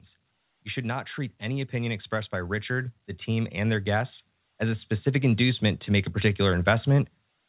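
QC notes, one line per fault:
0.8–6.94 s, automatic gain rising: the automatic gain control heard a quiet input and raised its gain slowly, by about 11 dB over roughly six seconds, so the speech and the background noise swell together. Throughout, the band stops at 4 kHz, which points to a narrowband telephone codec.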